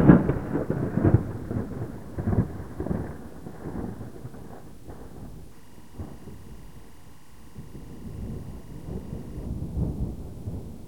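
From 5.51 to 9.46 s, timecode bleed: linear timecode running at 23.976 frames per second leaks into the audio, giving a faint chirping warble around 1 and 2 kHz, roughly 35 dB below the sound.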